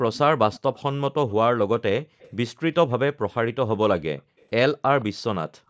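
At 0.52 to 0.81 s a faint delayed copy of the speech trails the talker by about 169 ms, sitting well below the main level, maybe 25 dB down. The likely cause is an echo leak: the far end is on a loudspeaker, and its echo canceller let some of its own microphone pickup slip back to us. The same 169 ms ghost returns, quieter and shorter, at 2.19 to 2.31 s.

Around 4.27 to 4.39 s the room background suddenly sinks, by about 40 dB at its deepest, for roughly a tenth of a second. That's the background gated by the echo canceller: while the loudspeaker was playing, the canceller clamped the microphone down hard, and the room sound came back once it let go.

Right after that, at 4.39 to 4.44 s, the echo leak slips through again, very faint and barely a scrap. A last brief burst at 5.01 to 5.05 s is back to the louder level, still 169 ms behind the speech.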